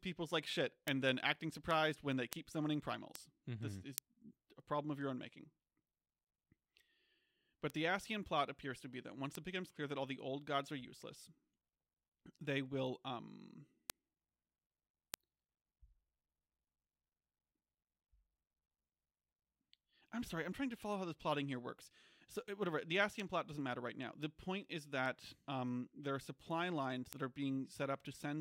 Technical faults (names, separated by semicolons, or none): word clock ticks